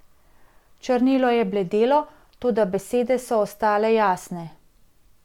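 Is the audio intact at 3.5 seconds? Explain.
Yes, at 3.5 seconds the speech plays through intact, with no dropout, click, distortion or other fault at that moment.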